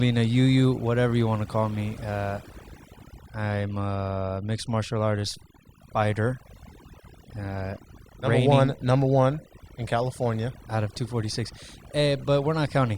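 From start to finish, the recording suffers from overdone noise removal: a noise reduction stage was pushed far too hard, so any frequency band sitting close to its noise estimate gets pulled down or switched off entirely. Softer parts of the speech fall below that line and vanish along with the noise. The result is a background that drops away, dotted with flickering, twinkling specks.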